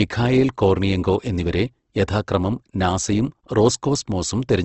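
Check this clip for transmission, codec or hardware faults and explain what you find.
The clip shows one fault, Opus compression, present throughout the speech. The damage points to a low-rate Opus stream, around 16 kbps in its music (CELT) mode, likely carrying the audio. With so few bits, the encoder preserves each band's overall energy but fills the detail by folding lower bands or inserting noise. Nothing sounds above about 8.2 kHz, so the speech is band-limited, and its voiced tones come through plainly rough, grainy and noisy.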